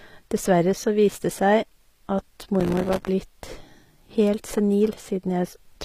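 Throughout the clip, codec damage is plainly audible. The treble extends up to 15.5 kHz with nothing above, yet it sounds rebuilt rather than recorded, and s sounds come out gritty, metallic or lispy. This points to HE-AAC compression at a low bitrate around 24 kbps as the likely cause: spectral band replication copies lower bands upward under a coarse envelope. That synthetic but extended top end is what separates it from a plain low-pass cut.

From 2.60 to 3.09 s, processor overload crackle rides on the speech. Over that half second the processor repeatedly failed to deliver its audio buffers on time. Each miss was filled with silence, leaving dozens of tiny hard-edged gaps a few milliseconds apart, which fits a buffer of about 3 ms. The result is a dense gritty tearing that stops once the load passes. A single network dropout would instead leave one longer, cleaner hole.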